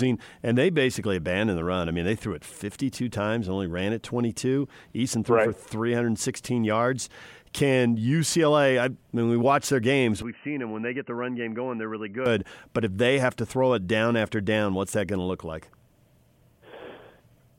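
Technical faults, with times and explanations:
10.22–12.26 s, input switched to a poorer device: right after "we watch their games" the speech abruptly turns dull and boxy and about 10 dB quieter, with no gap at the change. This is likely a jump to a narrower-band microphone path that passes nothing above 3 kHz and adds its own faint noise floor, roughly 50 dB down. On a spectrogram the upper band goes blank at a hard edge near 3 kHz, and the waveform envelope steps down, then both recover at 12.26 s.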